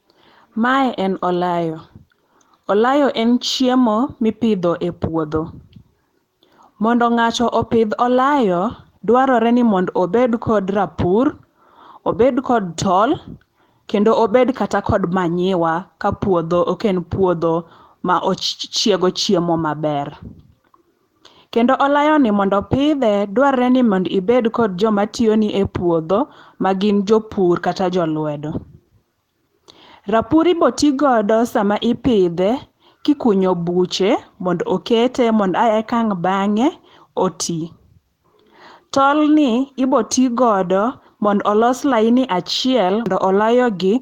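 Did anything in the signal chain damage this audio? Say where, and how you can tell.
No, nothing anywhere in the chain seems to have damaged this speech recording, so there's no stage to point to and nothing to explain.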